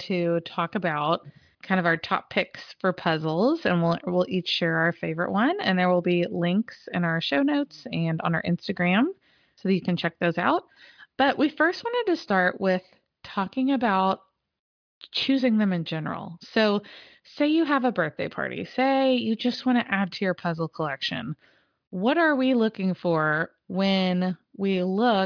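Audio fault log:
No audible faults anywhere in this speech recording.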